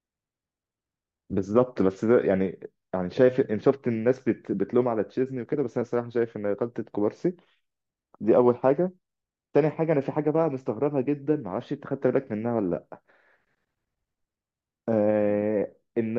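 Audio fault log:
No audible faults found in the speech audio.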